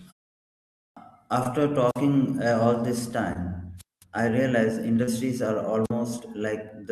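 At 0.78 s, after about 0.74 s of quiet, the speech bursts in abruptly with its opening sounds missing. Roughly 185 ms is lost up to 0.97 s. This is a clipped start after a pause: the output device dozed off in the silence and was still waking when the sound resumed.

At 1.43 s a short smear passes through the sound, lasting to 1.47 s. This is short concealed packet loss. About 20 ms of audio never arrived in time, and the receiver covered the gap by stretching the preceding sound, then blending back into the real signal.

From 1.86 to 2.02 s, hiss swells, the sound drops to near silence for about 48 ms, and then returns. This is a wireless microphone squelch dropout: the FM radio link faded enough that the receiver's squelch muted its output.

At 3.33 s another concealed packet loss leaves a brief wobble lasting to 3.37 s. Again about 20 ms went missing and was patched over from the sound just before it.

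A longer squelch dropout runs from 3.77 to 4.04 s, just before "I realize". Static rises, a hole of about 207 ms follows, and the sound returns.

Right after "I realize", from 5.03 to 5.09 s, a larger concealed packet loss smears the sound. About 40 ms was missing.

At 5.84 s a final squelch dropout brings a brief hiss and a gap of about 47 ms before the sound comes back at 5.91 s.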